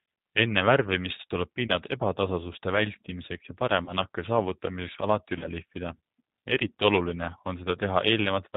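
From start to finish the speech carries plainly audible G.729 codec damage, consistent with the G.729A variant at 8 kbit/s. Each 10 ms frame is rebuilt from a vocal-tract filter, a pitch predictor and a handful of pulses, so the voice sounds slightly rough and synthetic, with nothing above 4 kHz. Plain band-limiting is different: a low-pass filter dulls the top without making the voice grainy, while this codec adds a buzzy, artificial texture on top of the lost brightness.

VoIP packet loss concealed by the speech codec occurs three times, at 1.67 to 1.71 s, 3.85 to 3.93 s and 5.39 to 5.46 s. Each gap is 20 ms, which fits a single lost packet. The decoder carries its last pitch and filter forward at falling gain, so the sound smears into a brief buzzy tone or coloured noise that fades. Damage continues slightly past the lost 20 ms because each frame builds on the last. A dropout or a click would instead leave silence or a sharp tick.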